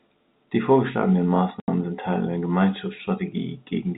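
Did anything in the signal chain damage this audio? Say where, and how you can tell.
Yes. Network stage: packet loss filled with silence cuts a hard-edged 80 ms hole into the speech from 1.6 to 1.68 s, which fits four lost 20 ms packets replaced by silence over the G.711 telephone link.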